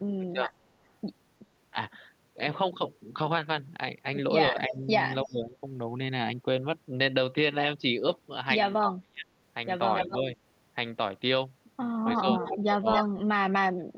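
It's a speech recording, and the talker keeps getting pushed down in short stretches, at 0.18 to 0.51 s, 4.52 to 5.63 s, 8.81 to 9.29 s, 10.07 to 10.3 s and 12.21 to 13.97 s. The dips run from a slight 5 dB or so up to about 30 dB at 8.81 s and in the final stretch. That pattern is speech suppressed in double talk. It's likely an echo canceller that couldn't tell this voice from the far end's loudspeaker echo while both sides spoke, so it turned everything down. Running through some of the same spots is echo leak, a delayed ghost of the voice coming back. There's a brief blip at 4.72 s trailing by about 312 ms and sitting around 10 dB under the speech. Longer bits come at 9.97 to 10.18 s and 12.05 to 13.21 s, both trailing by 264 ms and only about 5 dB down. That points to a speakerphone on one end whose canceller likely left part of the picked-up signal in and sent it back.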